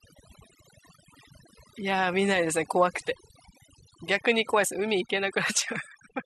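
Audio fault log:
Throughout, overdone noise removal: the denoiser's pushed way too hard, so it's gating bands near the noise floor, leaving twinkly near-silence and quiet parts of the speech cut away with it.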